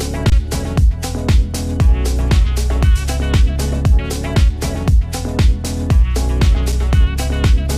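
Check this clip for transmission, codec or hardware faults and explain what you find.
Two dropouts, both an underrun with held sample. At 0.30 to 0.32 s and again at 6.72 s, the output buffer ran dry and the converter froze on its last value, so the sound flattens briefly, then comes back after about 20 ms and 5 ms of live audio went missing. The lengths fit 1024- and 256-sample gaps.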